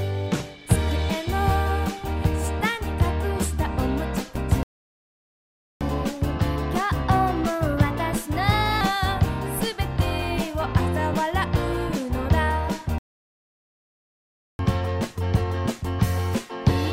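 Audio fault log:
4.63–5.81 s, playback stall: output likely starved of data or blocked, so the sound cuts out mid-flow for about 1.18 s before resuming.
5.81–8.81 s, catch-up at higher speed: the player resamples its backlog at 1.1× to regain time, so tempo and pitch rise about one and a half semitones, then settle.
12.98–14.59 s, playback stall: a second gap, likely the same starvation or blocked thread, silencing the sound for about 1.61 s before it picks up again.
14.59–16.93 s, catch-up at higher speed: backlog played at 1.15×, a faster recovery after the longer gap, lifting pitch by about two semitones through to the end.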